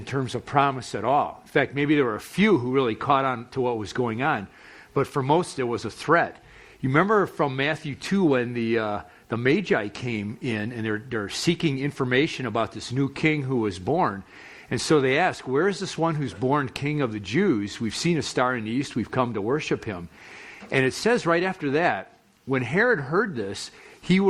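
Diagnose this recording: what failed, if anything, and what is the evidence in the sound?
Nothing in the chain shows a failure: level, timing and continuity hold steady throughout, and no stage from capture through conversion, transmission and playback leaves an audible mark on the signal.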